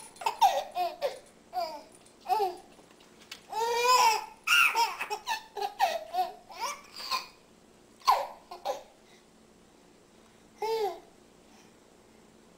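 No faults can be heard anywhere in this recording.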